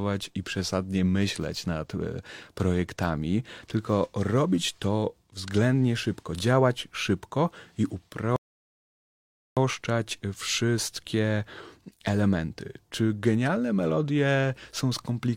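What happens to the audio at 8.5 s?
The speech cuts to silence from 8.36 to 9.57 s, then resumes exactly where it stopped: a rebuffering stall, the player waiting for more downloaded audio, adding 1.21 s.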